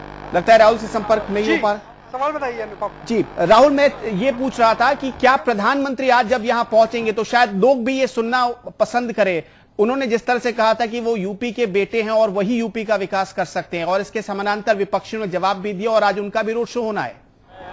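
Nothing stood out as a technical fault on listening to this recording.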